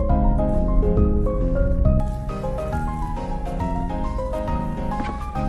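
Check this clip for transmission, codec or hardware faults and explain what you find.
One fault is present: de-emphasis applied wrongly, from 0.0 to 2.0 s. Over that span a treble-cut filter acts on a signal that carried no matching pre-emphasis boost, or the cut has been applied a second time. The response falls away smoothly above the midrange, sitting about 11 dB down at 10 kHz relative to 1 kHz. The sound there is dull and muffled, lacking its upper detail, until the filtering stops at 2.0 s.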